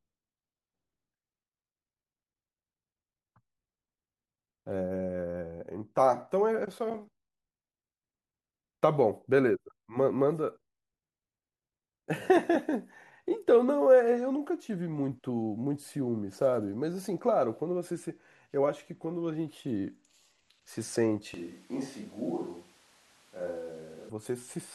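Speech clip with a switch to a distant microphone from 21.34 to 24.10 s. The sound abruptly turns roomy and hollow and drops about 5 dB, with background noise roughly 25 dB below the speech. The likely cause is that the close microphone dropped out and a farther one took over.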